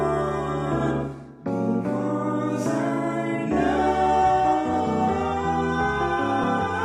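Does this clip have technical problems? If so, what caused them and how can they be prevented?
Yes. There are two cases of compressed frames skipped, at 4.73 s and 6.43 s. At each point the audio jumps ahead slightly. The first jump is about 20 ms, which fits one lost 20 ms frame. The second is about 40 ms, which points to two frames. The decoder never played these frames, because they were missing or rejected as damaged. To prevent this, protect the stream against loss and corruption with checksums, retransmission or forward error correction, and use packet-loss concealment in the decoder.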